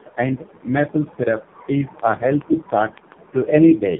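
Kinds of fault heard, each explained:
Tandem speech coding: the call was decoded and re-encoded by two low-rate narrowband speech coders in a row, consistent with AMR-NB, each compressing the previous one's errors. The speech is rough, muffled and warbly, with nothing above 3.6 kHz.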